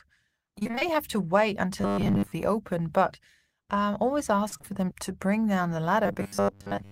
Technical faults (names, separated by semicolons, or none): repeated packet loss (robotic sound); robotic sound from repeated short buffers